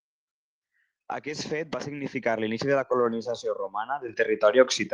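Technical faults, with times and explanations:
2.04 s and 4.08 s, microphone volume stepped up: the speech and background jump louder together, about 6 dB each time, as the input volume is raised abruptly mid-stream.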